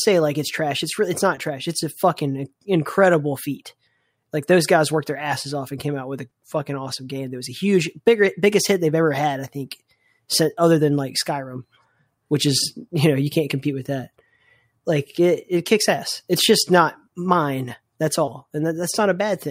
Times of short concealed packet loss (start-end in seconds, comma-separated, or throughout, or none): 1.35-1.39, 6.29-6.33, 18.25-18.29